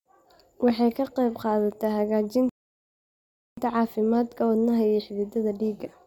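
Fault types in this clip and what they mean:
Rebuffering stall: the player ran dry of downloaded audio and just waited for more, so the speech drops into silence at 2.49 s and picks up at 3.58 s right where it left off. Nothing goes missing, but about 1.08 s of dead air gets added.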